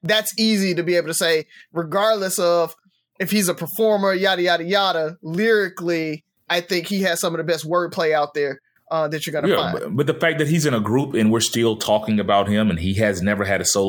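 No technical faults can be heard anywhere in this recording.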